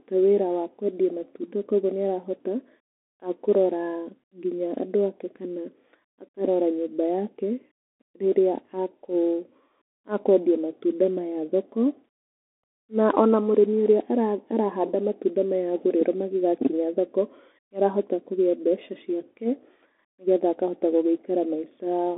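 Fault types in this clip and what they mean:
Bluetooth CVSD headset codec: the whole clip runs through a one-bit delta coder that only steps the level up or down, squeezing the speech into a phone band of 150 Hz to 3.5 kHz, nothing above 3.8 kHz, with plainly audible granular, scratchy coding grit.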